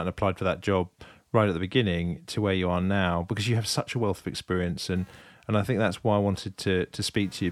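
Computer activity noise runs from 4.95 s to the end of the speech clip at 7.52 s: a buzzy, chirping pulse train repeating at around 200 times a second, sitting roughly 35 dB below the speech. It comes from the computer's load shifting current through the ground the audio circuit shares, so the noise follows processor, graphics or mouse activity rather than anything in the speech itself.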